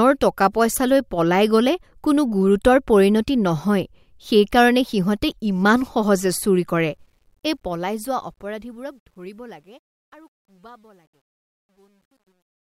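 From 6.81 s, after "সিহঁতে ইমান সহজে চুৰি", the fade-out carries truncation distortion on a fade: undithered level steps, which fits roughly 11-bit resolution. From 9.55 s to the end, the tail turns gritty. The waveform shows square staircase steps, and the spectrogram shows broadband speckle.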